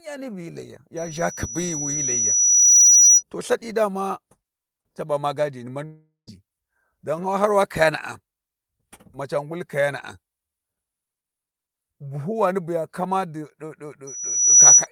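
A piercing 5.9 kHz whistle swells out of the speech from 0.96 s to 3.23 s, building over roughly two seconds to about 15 dB above the voice, and returns from 14.07 s to 14.87 s, rising within about half a second. This is loudspeaker feedback squeal: the microphone is hearing the speaker it feeds, and at 5.9 kHz the loop gain tops one, so that tone grows by itself. From 5.85 s to 6.29 s the speech gives way to a fading buzzy smear, then a brief silence of about 0.13 s, before resuming with a chunk missing. That points to a likely long network dropout, where the receiver stretched the last sound to cover roughly 0.42 s of audio that never arrived.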